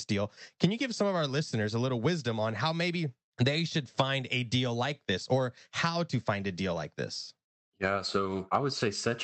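No technical faults audible.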